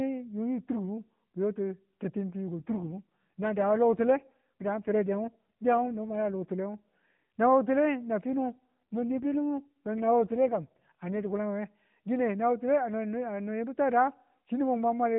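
Speech heard through a narrowband mobile channel turns rougher, buzzier and more synthetic from 2.59 to 6.45 s and again from 8.33 to 11.33 s, with no gap and no change in bandwidth. This is an AMR rate drop. The codec's vocal-tract model is fed fewer pulse bits while protection for the weak radio link takes the rest, which fits a step down from 12.2 to 5.9 kbps before the rate recovers.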